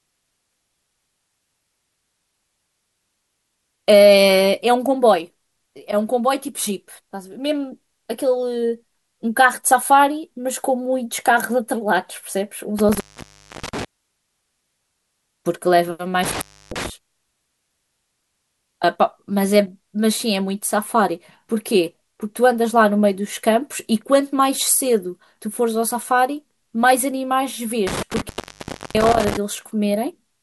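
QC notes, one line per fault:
12.79–13.85 s, 16.23–16.90 s and 27.87–29.37 s: intermittent contact. The speech cuts out three times as a loose connection opens, for about 0.64 s, 0.30 s and 0.66 s, with crackle where the contact scrapes open and shut. While the line is open, faint hiss remains. That crackle at the edges and the hiss in the gap separate it from a clean digital dropout, which falls straight to silence.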